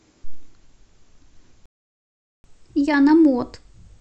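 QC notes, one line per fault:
1.66–2.44 s, playback stall: the player likely ran short of data or its thread was blocked, so the speech cuts to silence for about 0.78 s, then resumes.
2.44–4.01 s, catch-up at higher speed: the player resamples its backlog at 1.1 times speed to recover lost time, raising pitch by roughly one and a half semitones until the end.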